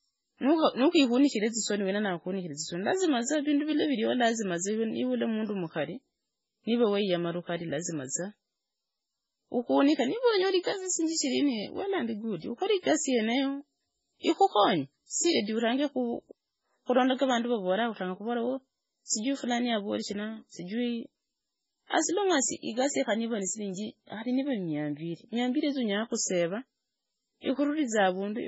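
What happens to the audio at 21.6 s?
Throughout the clip, including 21.6 s, heavy MP3 compression removes everything above 7.7 kHz and toggles weak frequency lines, leaving watery, swirly speech. The likely cause is a bitrate near 16 kbps.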